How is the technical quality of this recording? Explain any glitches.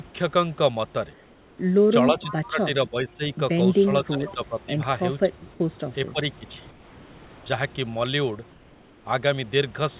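The recording has three kinds of call-processing glitches: pauses with substituted background noise, repeated dips in the speech, and two brief echoes.

Comfort noise in place of the background appears at 1.13–1.58 s, 6.71–7.46 s and 8.51–9.05 s. The sender likely stopped transmitting during pauses, and the receiver filled them with synthetic noise. The real room background turns into a smooth, featureless hiss about 2 dB quieter.

Speech suppressed in double talk occurs at 2.11–2.68 s, 2.88–3.22 s, 4.03–4.79 s, 5.25–5.49 s, 6.12–6.20 s and 6.38–6.60 s. With both sides talking, the echo canceller likely could not separate the voice from loudspeaker echo and attenuated everything. The speech sinks by roughly 15 to 25 dB.

An echo leak is heard at 2.18–2.35 s and 4.25–4.34 s. On a loudspeaker end, the echo canceller likely missed part of the returning signal. A faint copy of the voice follows about 0.47 s later, roughly 15 to 20 dB below the speech.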